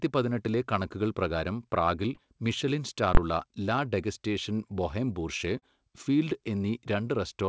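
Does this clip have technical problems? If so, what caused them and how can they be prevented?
Yes. There are two kinds of fault.

Short concealed packet loss occurs twice. The first is at 2.15–2.20 s, just after "പതിനെട്ടിലെ കണക്കുകൾ പ്രകാരം പ്രാഗിൽ". The second is at 5.59–5.65 s, after "ലാ ഡെഗസ്റ്റേഷൻ ബൊഹേം ബൂർഷ്വ". Each time about 30 ms of audio arrived too late, and the receiver stretched the preceding sound across the hole, so it is heard as a brief smear. What separates it from a plain dropout is that the gap is filled rather than silent or clicked. Prevention: a more robust network path, forward error correction or a slightly deeper jitter buffer.

Invalid numbers at full scale produce one sharp bang at 3.15–3.17 s, between "കണക്കുകൾ പ്രകാരം പ്രാഗിൽ മിഷെലിൻ" and "ലാ ഡെഗസ്റ്റേഷൻ ബൊഹേം ബൂർഷ്വ". A calculation produced infinite or invalid values that were forced to maximum level for about 23 ms, which fits a 1024-sample processing block. 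What separates it from an ordinary click is that it sits flat at one extreme value, far beyond the speech peaks, and lasts exactly one block. Prevention: check processing for invalid values and replace them with silence before output. The G.722 call path carries the audio at 64 kbps with nothing above 8 kHz.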